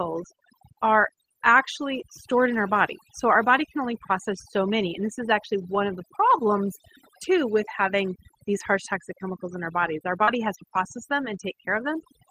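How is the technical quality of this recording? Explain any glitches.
The technical quality is compromised by two problems: heavy-handed processing across the whole clip, and one brief dropout near the end.

Throughout the speech, the background is pulled down and broken up into twinkling specks. This is overdone noise removal. The reducer was pushed so hard that any frequency band close to its noise estimate gets pulled far down or shut off, and the softer parts of the voice fall under that threshold and are stripped away along with the noise.

At 10.23 to 10.30 s, between "in our bodies our" and "has to process them", there is a short smear where the sound briefly wobbles instead of continuing cleanly. This is short concealed packet loss. About 40 ms of audio never arrived, and the receiver papered over roughly 37 ms of that gap by extending the preceding sound before blending back into the real signal, so whatever fell in that window is blurred or lost.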